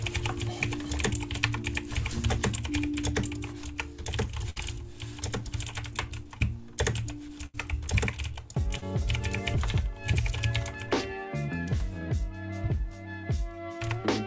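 At 4.50 to 4.58 s and again at 7.46 to 7.56 s, a burst of packet loss left the receiver with nothing to decode. It extended the last sound and faded it out, filling about 61 ms the first time and 76 ms the second. When the audio resumes, it comes in further along, with about 60 ms and then 80 ms of the original missing. Each gap sounds like a held, dimming tail followed by a jump.

At 8.78 to 8.84 s there is a short concealed packet loss. A few hundredths of a second arrived too late, so the decoder synthesised about 41 ms from the preceding sound and blended it back into the real signal, with about 40 ms of the original lost. It comes across as a brief smear or wobble. The call path's band limit, with nothing above 8 kHz, fits G.722 at 64 kbps.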